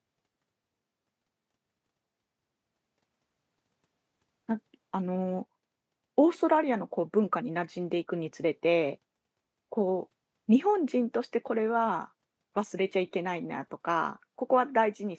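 No technical faults are audible.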